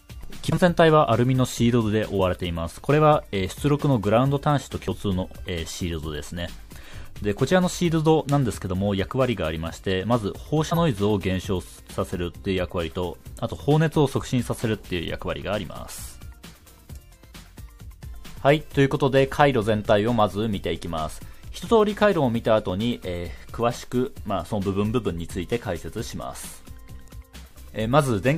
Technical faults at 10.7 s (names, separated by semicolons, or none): compressed frames skipped